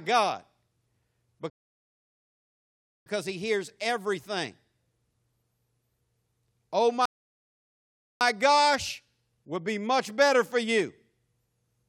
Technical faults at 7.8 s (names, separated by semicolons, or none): rebuffering stall